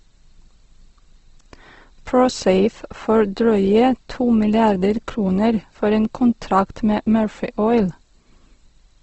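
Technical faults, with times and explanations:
throughout: Opus compression. The speech sounds grainy and rough, with bands filled by noise or folded copies of lower ones rather than left empty, and nothing above 8.1 kHz. This likely comes from Opus in its music mode at around 16 kbps.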